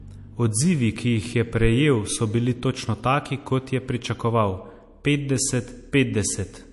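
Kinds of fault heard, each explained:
MP3 compression: Throughout the speech there is a plainly audible watery, swirling texture, and nothing is heard above 11.3 kHz, where the treble stops at a hard ceiling. This is likely MP3 coding at a low bitrate, around 48 kbps. The encoder runs short of bits, so it removes the top of the spectrum at a fixed point and drops weaker frequency lines that switch on and off between frames, which creates the shifting, watery sound.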